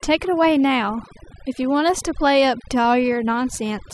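Overdone noise removal runs through the whole of this short speech clip, from start to finish. A noise reduction process has been pushed far too hard, so any frequency band sitting close to the estimated noise level gets pulled right down or switched off entirely. The background drops away and breaks up into twinkling, chirpy specks, while the softer components of the voice are stripped away too.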